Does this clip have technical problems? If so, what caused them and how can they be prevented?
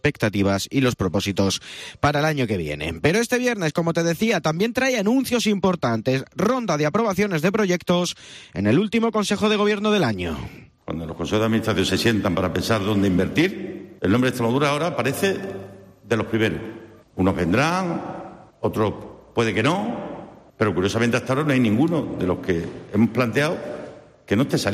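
No, nothing in the clip points to a technical fault, so there is no cause to trace and nothing to prevent.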